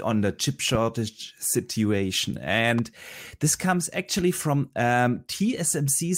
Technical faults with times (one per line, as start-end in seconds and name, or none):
0.75-0.77 loud pop
2.78-2.81 loud pop